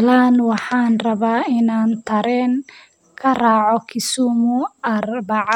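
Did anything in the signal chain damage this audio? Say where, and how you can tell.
No, nothing in the signal chain damaged this audio.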